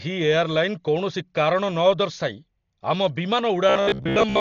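From the start of the speech, the sound is dull and band-limited, and a rough, fluttering noise clings to the voiced sounds. This heavy damage likely comes from Dolby Digital compression at a starved bitrate, which fits about 40 kbps. The encoder drops high frequencies and leaves many finer frequency lines without detail, so the decoder fills them with noise. That fizz, locked to the tones themselves, separates it from plain low-pass filtering, which would sound muffled but clean.

From 3.70 s to 4.40 s the voice collapses into a rigid, metallic buzz at 66.7 Hz that still loosely tracks the speech. This robotic sound likely comes from repeated short buffers. When audio stopped arriving in time, the player looped the last 15 ms chunk over and over for most of that stretch while the real audio was skipped. The steady pitch, fixed at one over the buffer length, sets it apart from codec warble, which shifts and smears instead of droning.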